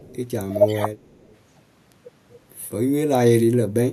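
From 0.00 to 0.17 s, a faint delayed copy of the speech trails the original by 239 ms. This is an echo leak. It sits about 30 dB below the direct speech. The likely cause is a far end on loudspeaker whose echo canceller left some of its microphone pickup in place and sent it back down the line.

Between 0.48 and 1.01 s, the speech dips in pieces, roughly 0.4 s in all, by up to about 15 dB. This is speech suppressed in double talk. The likely cause is both sides talking at once. The echo canceller could not tell its own talker from the returning loudspeaker signal, so it turned both down. The result is choppy, ducked speech rather than a steady level.

From 0.99 to 1.36 s, the echo leak returns with the same 239 ms delay. This time it is weaker, around 40 dB below the speech. The matching delay suggests the same loudspeaker path as at the start.

At 1.92 s, a single sharp tick cuts across the sound. 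This is a bit error spike in one sample. The likely cause is one flipped bit in memory or on a digital link. That throws the sample value off by a power of two before it snaps back, so the click is broadband and unrelated to the speech around it.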